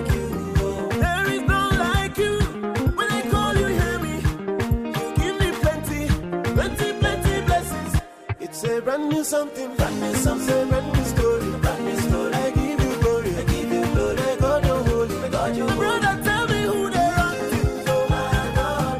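From 15.78 s to the end, an adaptive stream at a lower bitrate abruptly brings more codec artefacts with no gap.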